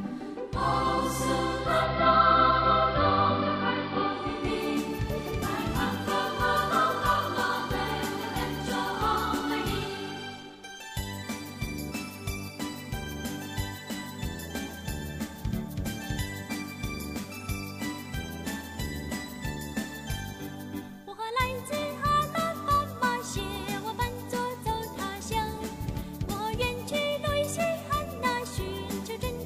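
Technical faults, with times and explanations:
1.40–4.51 s, digital radio blending to analogue: the receiver lost the digital stream and cross-faded over about 0.48 s to the AM broadcast, then back. The sound goes dull, shifts level by about 1 dB, and carries hiss roughly 20 dB down.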